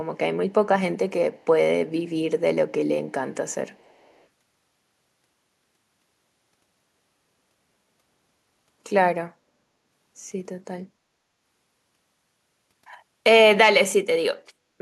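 Faint echo leak appears at 1.38–1.45 s, 1.94–2.09 s and 3.7–4.25 s: a very quiet copy of the speech returning 462 ms late, likely from an echo canceller missing loudspeaker pickup. Unlike room reverb, it is a distinct delayed repeat, not a smooth tail.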